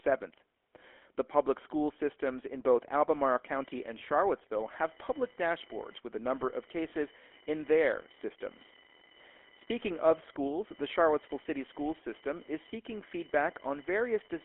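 From the start, the speech carries the GSM full-rate codec's signature: a buzzy, gravelly roughness, plainly audible, from a coder that models the vocal tract and excites it with a sparse, regular pulse train rather than the real waveform. The damage fits the 13 kbps full-rate codec. On a spectrogram the energy sits in a telephone band from 300 Hz to 3.4 kHz, with nothing above, and harmonics look smeared and grainy instead of cleanly striated.

At 3.15 s, just after "school systems in both", computer activity noise begins and continues to the end. Load changes in the host machine are modulating the audio circuit's shared ground, so a chirping buzz with a pulse rate of roughly 1 kHz rides under the speech at roughly 25 dB below it. It follows the computer's activity, not the talker. A spectrogram shows a thin line near 1 kHz with harmonics that stays present through pauses, and the waveform shows a low, busy floor between phrases.

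From 6.90 to 6.95 s, lost GSM frames cause a brief glitch. The decoder fills the gap by repeating the last good frame's parameters, so the sound briefly freezes into a rough, metallic ring instead of moving on. The length points to a single lost 20 ms frame. On a spectrogram it looks like a short, flat, frozen strip where the formants stop changing. In the waveform it shows a repetitive texture.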